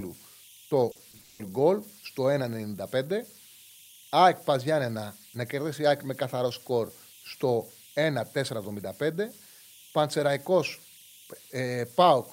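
A whistle around 3 kHz sits in the pauses from the start, with grainy noise beneath the speech. These are converter idle tones: the delta-sigma converter, lacking dither, settles into repeating bit patterns on low-level input, producing error about 25 dB below the signal.

From 0.91 to 1.41 s the speech turns choppy and robotic, with chunks missing. This is repeated packet loss: several holes, the longest 180 ms, were patched by extending the preceding sound, concealing 280 ms, 56% of that stretch.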